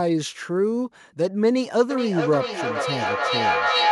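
From 1.9 s to the end, feedback howl: a microphone-to-loudspeaker loop gains level each trip, swelling into a tone near 1 kHz with repeats roughly every 0.4 s. It peaks about 2 dB above speech and shows as a bright horizontal spectrogram line.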